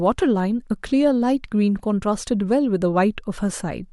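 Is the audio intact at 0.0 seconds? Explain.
Yes, the audio is intact at 0.0 seconds, with no technical fault at that point.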